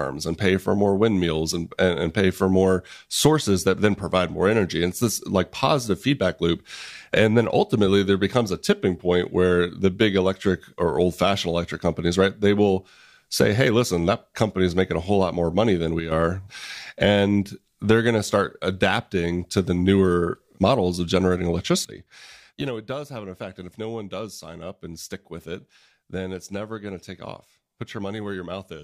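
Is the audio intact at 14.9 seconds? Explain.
Yes, the audio is intact at 14.9 seconds, with no fault audible at that moment.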